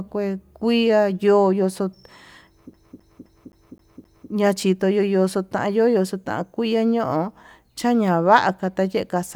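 From 2.73 s to 4.30 s the speech sticks in a CD stuck on one turn. The laser keeps jumping back one track at the same scratch, so a 261 ms slice plays six times, each pass cut by a brief mute, giving a fast, even stutter.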